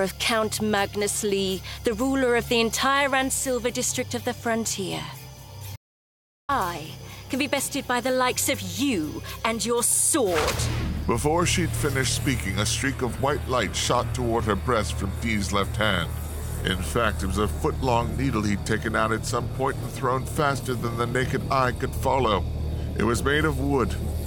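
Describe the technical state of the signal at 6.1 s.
At 6.1 s you're inside an audio dropout to silence, 5.76 to 6.49 s: dead silence, no room tone, most likely the input briefly lost.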